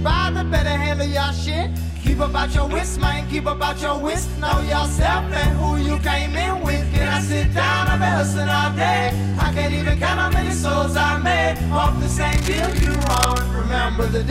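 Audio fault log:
12.32–13.42 s, cable scratch noise: dense, uneven scratching bursts sit fairly loud over the sound, likely from a worn cable or connector being moved.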